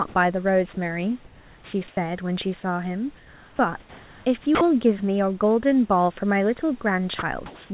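Speech carried over a narrowband call path, with nothing above 4 kHz, which points to a G.711-style codec, and room noise sitting about 34 dB below the voice. The first fault is sound dropped by the voice detector, at 0.08–0.14, 0.74–0.77, 4.55–4.61 and 7.19–7.22 s. In each, 30–60 ms of real sound is replaced by a short patch of steady hiss. The cause is likely the sender's detector mistaking soft speech for background and halting transmission, with the receiver filling in comfort noise. Unlike packet-loss concealment, there is no smeared or repeated waveform, only a flat, featureless noise. The second fault is comfort noise in place of the background, across 1.25–1.97, 3.17–4.25 and 7.19–7.7 s. In these pauses the room's own noise, with its natural texture, gives way to an even, smoother synthetic hiss until speech resumes. That is likely discontinuous transmission, with the receiver synthesizing noise roughly matched to the background. 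A gap with true dead silence would instead drop away completely. The third fault is an onset clipped by the voice detector at 3.57–3.59 s. About 20 ms of the attack is missing, so the sound starts abruptly out of the comfort noise without its soft beginning. The likely cause is the detector reacting late to renewed sound. This differs from a gain fade-in, where the onset would swell in gradually rather than snap on.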